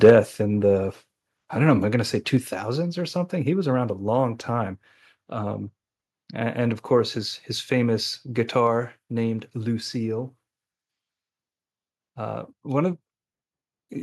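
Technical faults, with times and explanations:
0.04–0.12 s, microphone overload: the opening peaks turn harsh and crackly, with flattened tops on around a tenth of the samples. The likely cause is an input level set too high, driving the signal about 5 dB past the converter's ceiling and shearing off each crest.
0.1 s, microphone volume stepped down: the whole level, voice and background together, drops abruptly by about 4 dB right inside that distorted burst. This is likely the call software reacting to the clipping and cutting the device's input gain in a single step.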